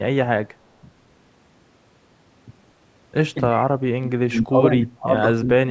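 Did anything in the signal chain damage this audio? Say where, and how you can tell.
Yes, in the call processing. From 3.4 to 5.14 s, and again from 5.35 s to the end, the speech drops by up to about 30 dB and breaks up. That is speech suppressed in double talk. An echo canceller likely mistook the talker for loudspeaker echo and ducked it.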